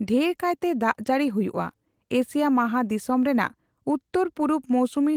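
The speech has no technical faults to report, and its Opus voice compression, running in hybrid mode at 24 kbps, keeps the full band with content reaching up to about 20.2 kHz.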